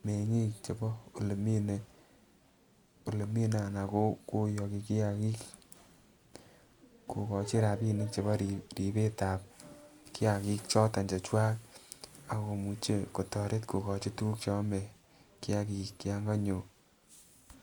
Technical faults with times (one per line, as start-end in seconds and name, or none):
none